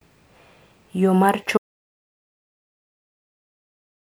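At 1.58 s the speech cuts off mid-flow into silence, with no room tone, and stays silent to the end. This audio dropout to silence likely comes from lost input, such as a disconnected device or a failed link, while recording continued writing silence.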